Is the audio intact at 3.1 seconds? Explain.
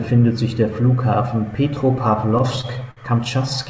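No, 3.1 s sits inside a stretch of repeated stalls (stutter) from 2.38 to 3.32 s. Packets kept arriving late, so the jitter buffer ran dry over and over, and the receiver stretched the last sound to cover each gap, the longest about 55 ms. Nothing's lost, but it drags and stutters.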